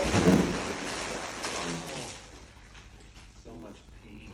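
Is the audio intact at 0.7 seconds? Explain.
No, at 0.7 s there is a steady buzz near 86 Hz and the sound runs slow, at 0.861 times normal speed with its timbre kept. This comes from a block size mismatch (padded), present throughout the clip. The writing stage delivers short blocks, and a stage reading what fits 512-sample blocks fills each remainder with zeros.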